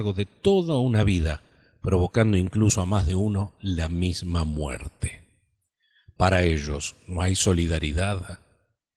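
Speech with no technical faults; the Opus voice compression shows only a light coding character, consistent with hybrid-mode fullband operation at around 20 kbps.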